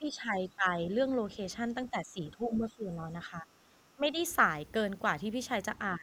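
An echo canceller that likely could not tell the near talker from loudspeaker echo while both sides spoke has clamped down on this speech clip, producing speech suppressed in double talk. The voice dips in stretches at 0.0–0.75 s, 1.9–3.02 s, 3.25–3.78 s, 3.95–4.18 s and 5.97–6.02 s, losing around 10 dB, with the deepest cut, near 15 dB, in the 3.95 s patch.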